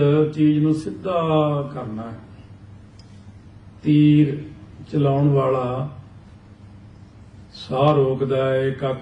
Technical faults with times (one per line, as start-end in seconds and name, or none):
none